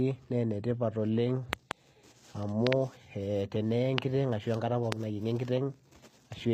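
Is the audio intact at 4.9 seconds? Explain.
No. From 4.92 to 4.94 s a single sharp pop cuts through the speech, roughly 25 dB above it, while the speech carries on underneath. It is a loud pop, most likely a sudden voltage step from a plug, switch, static or driver glitch, shaped by the circuitry that follows. Throughout, including this moment, s sounds turn gritty and lispy and the treble sounds bright but artificial. This comes from HE-AAC compression, which fits a low bitrate near 24 kbps and rebuilds the upper spectrum from copied lower bands.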